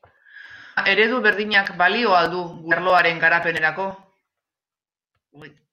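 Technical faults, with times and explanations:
0.77 s, damaged data in a compressed stream: a brief glitch just before "eredu berdinak balio al", as corrupted bytes made the decoder lose frame sync and skip ahead to the next header.
2.71 s, damaged data in a compressed stream: another short blip between "berdinak balio al du" and "arloaren garapenerako", where the decoder misread broken frames and resynced.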